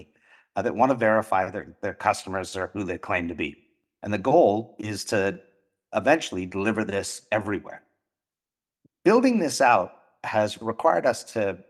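Nothing stood out on listening to this speech recording.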